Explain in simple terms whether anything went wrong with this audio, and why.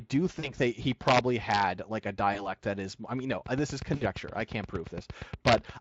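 Three separate problems can be heard in this speech recording.

VoIP packet loss concealed by the speech codec occurs at 0.39–0.51 s, 2.33–2.54 s and 3.95–4.04 s. Pieces of 40, 20 and 60 ms went missing, and the decoder filled each gap with a fading guess.

Integer overflow appears at 1.08–1.63 s and 5.47–5.55 s. Loud peaks went past the largest number the system could hold and wrapped around, causing harsh, sharp cracks.

A train of clicks runs from 3.46 to 5.70 s. It is about twenty evenly spaced ticks, roughly 8.5 per second, likely caused by electrical interference or a faulty connection or power supply.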